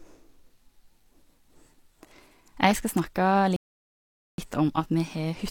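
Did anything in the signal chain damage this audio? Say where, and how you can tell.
Yes, a rebuffering stall at the playback stage. The speech drops to silence from 3.56 to 4.38 s, then resumes exactly where it stopped. Nothing is lost. About 0.82 s is added.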